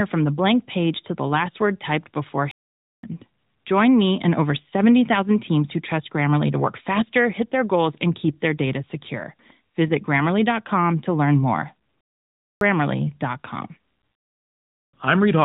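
At 2.51 s, right after "last word typed before", the speech cuts out for about 0.52 s until 3.03 s, and again at 12.01 s after "to learn more" for about 0.60 s, resuming at 12.61 s. Each is a playback stall, likely the player running dry or its thread blocking. The waveform drops to a flat line and the spectrogram shows a blank vertical band across all frequencies up to the narrowband ceiling at 4 kHz.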